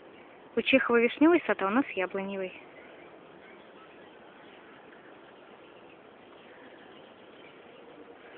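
Nothing technical goes wrong anywhere in this audio, so there's no fault to walk through here.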